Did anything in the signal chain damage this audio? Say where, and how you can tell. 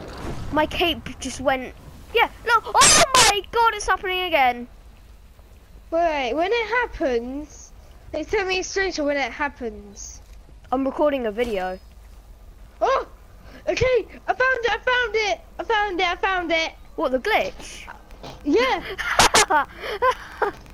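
Yes. From 17.64 s to 20.71 s a train of clicks, around twenty, arrives unevenly at about 7.5 per second and peaks at roughly the level of the sound itself. The likely cause is interference or a struggling interface in the analogue wiring. The waveform shows repeated similar spikes, and the spectrogram shows thin full-band vertical lines.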